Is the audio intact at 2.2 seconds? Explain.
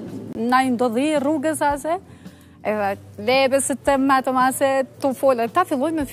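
Yes, the audio is intact at 2.2 seconds, with no dropout, click, distortion or other fault audible at that moment.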